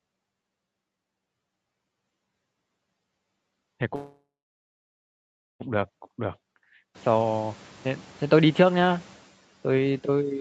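Speech over a call path, with two faults. From 3.95 s to 5.62 s the audio stops and the last sound trails off as a fading buzz or hiss, falling silent for about 1.34 s before resuming where it left off. Nothing is skipped, so roughly 1.65 s of delay is inserted. This is a call audio freeze, likely from delayed packets draining the jitter buffer. From 6.94 s to 9.24 s the noise suppressor is catching up. Room noise jumps by about 23 dB near 7 s, and at first it comes through with less reduction than later. Over about 2.3 s the suppressor's noise estimate adapts and the noise sinks by about 7 dB. Nothing is present above 8 kHz, which fits Opus coding at that bandwidth.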